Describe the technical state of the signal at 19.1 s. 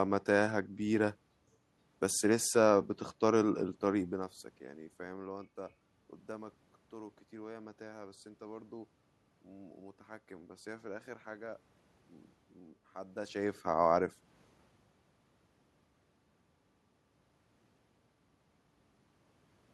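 At 19.1 s the signal is intact, with only the room's own background noise beneath the speech.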